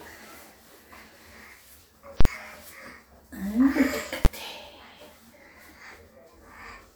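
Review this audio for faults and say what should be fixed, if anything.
Invalid numbers at full scale occur at 2.21–2.25 s, a 46 ms block fitting 2048 samples, and at 4.25 s, a single bang. The output sits flat at one extreme value far beyond the audio's peaks, showing as a flat plateau on the waveform with bright broadband columns at its edges on a spectrogram. To fix it, check for infinite or invalid values and replace them with silence before output.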